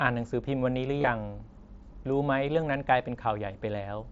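At 0.99 to 1.07 s, concealed Bluetooth headset packet loss hits the speech in a scattered cluster: about 45 ms lost across 75 ms, the longest gap 22.5 ms. The receiver fills each hole by repeating the closest-matching recent stretch of waveform, so the run comes through as a brief buzzy, held tone with a slight warble as real audio resumes. A second, 15 ms loss follows at 2.61 s. The mSBC wideband link carrying it adds only light graininess.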